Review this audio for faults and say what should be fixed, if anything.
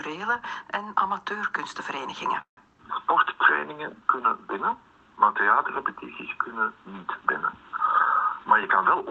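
A call audio freeze at 2.41–2.59 s is likely from held-up packets. The last sound stretches and fades to silence for 110 ms, then resumes where it stopped, so nothing is lost, unlike a dropout.

A jitter buffer speed-up from 7.94 to 9.02 s trims pitch-period slices, roughly 70 ms in all. The sound runs about 6% fast at unchanged pitch, unlike resampling, which would raise it.

A steadier network path and a jitter buffer target sized to the link's real delay variation would prevent both.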